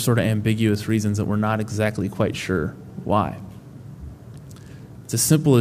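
No technical faults are audible.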